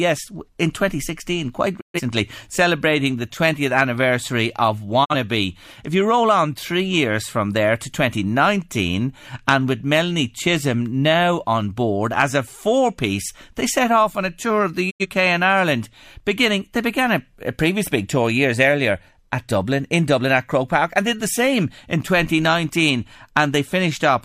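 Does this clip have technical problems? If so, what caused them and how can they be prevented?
Yes: a digital broadcast dropout mutes the speech at 1.79–2.01, 5.04–5.15 and 14.89–15.06 s, each a quick 20 ms fade to true silence, not a buzz or repeated fragment, as the receiver discarded failed frames of about 43 ms. A stronger, steadier reception signal prevents it.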